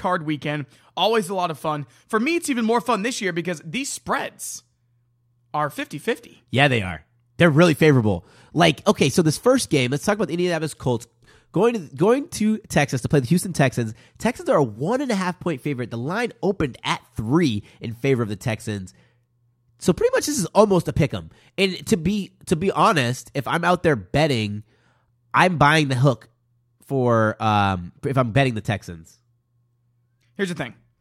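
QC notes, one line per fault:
No faults to note for this clip.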